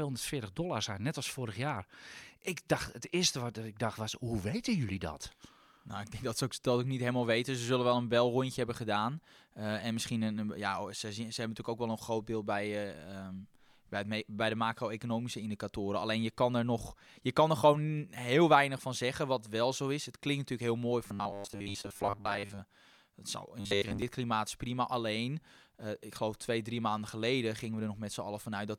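From 21.08 to 22.61 s, after "klinkt natuurlijk heel mooi", and 23.60 to 24.02 s, before "klimaat is prima", the speech becomes a rigid, metallic 100 Hz buzz. This is robotic sound from repeated short buffers. Audio likely arrived late, so a 10 ms chunk kept repeating while most speech was skipped.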